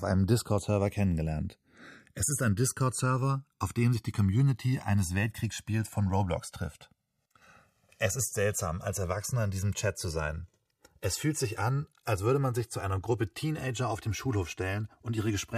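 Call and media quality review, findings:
Slow flanging sweep throughout. Channels drifting apart: two capture devices on separate clocks, mismatch near 200 ppm. Inter-channel delay grows to a few milliseconds; mono sum drags comb notches across the speech spectrum.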